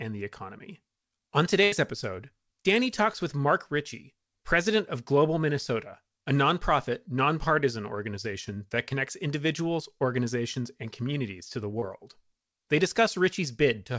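A speech recording carried over a call link, with audio stopping at 8 kHz as a wideband codec such as G.722 would leave it. From 1.64 to 1.74 s the sound turns into a held, fading continuation before resuming further on. This is a burst of packet loss: about 80 ms never arrived in time, so the receiver stretched the last received sound, letting it decay across the gap, and the audio in between is simply gone. A second, much smaller glitch at 11.80 to 11.84 s shows up as a brief smear or wobble. This is a short concealed packet loss in which roughly 20 ms went missing. The decoder papered over the hole by extending what came just before, based on its pitch or noise character, and then crossfaded back into the real signal.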